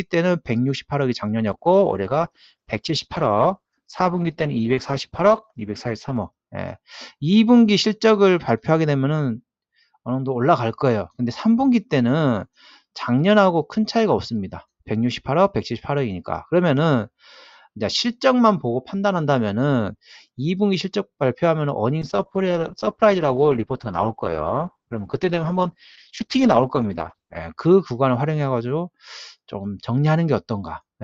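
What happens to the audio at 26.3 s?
At 26.3 s the sound is coarsely coded, rough, watery or muffled, because a call bitrate drop runs from 22.02 to 27.45 s. The encoder fell from 128 kbps to 11 kbps, held that low rate for about 5.4 s, and the quality clears as the bitrate recovers.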